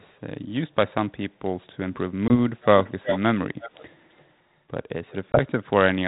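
At 2.28 s, and again at 5.32 s, there is packet loss on an ADPCM call. Each time about 20 ms of speech, which fits a single lost packet, drops to silence with hard edges. The decoder's adaptive predictor and step size then restart out of step with the sender's, so the speech returns slightly distorted before settling by 2.35 and 5.39 s. A waveform shows a flat gap followed by a distorted onset. A spectrogram shows a vertical blank slot and then a short broadband smear.

From 2.61 s a delayed copy of the speech returns, most likely an echo leak from a far-end loudspeaker whose echo canceller let its microphone pickup through. The copy trails the speech by 338 ms. It appears as faint scraps at 2.61–2.65 s and 5.10–5.15 s. It is a near-full-level repeat at 2.83–3.20 s, clearly audible at 3.59–3.95 s, and barely there at 4.17–4.24 s. On a spectrogram the harmonic patterns reappear, shifted right by a third of a second. 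The band stays below 4 kHz, as the G.726 link carries.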